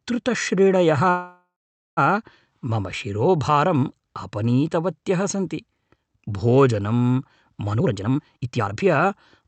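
A call audio freeze runs from 1.09 to 1.99 s, likely caused by delayed packets emptying the jitter buffer. The last sound is stretched into a fading buzz or hiss, then about 0.44 s of silence. Speech resumes exactly where it stopped, so nothing is lost but the call now lags by roughly 0.88 s.

A jitter buffer speed-up follows from 7.73 to 9.45 s. With too much audio queued, the receiver repeatedly trims pitch-period-sized slices, roughly 0.7 s in all. Speech plays at 145% speed without any change in pitch, sounding rushed. Throughout, the call codec's high end stops near 8 kHz.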